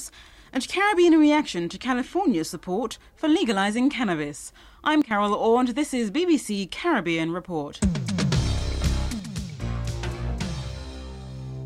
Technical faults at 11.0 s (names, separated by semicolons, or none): sudden gain jump